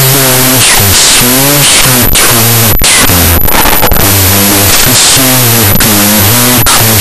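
Speech with a wrong sample width throughout: 16-bit read as unsigned 8-bit plays at half speed, an octave low, buried in broadband noise smearing the spectrogram.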